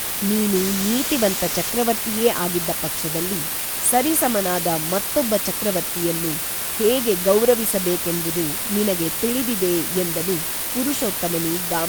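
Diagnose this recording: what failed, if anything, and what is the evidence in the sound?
Sample-format conversion failed: low bit depth with dither, about 4 bits, leaves a steady white hiss roughly as loud as the speech throughout, replacing distortion with noise.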